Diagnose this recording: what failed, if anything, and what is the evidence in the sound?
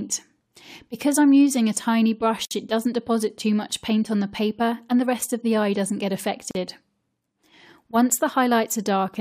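Two short dropouts cut into otherwise continuous sound: a silence of about 59 ms from 2.45 to 2.51 s, and another of about 40 ms from 6.51 to 6.55 s. Their edges are smeared, and the sound resumes exactly where it left off. The 4-second spacing points to a gap at a join of encoded pieces at the codec stage: separately encoded segments were concatenated with each encoder's leading delay and final-frame padding left untrimmed.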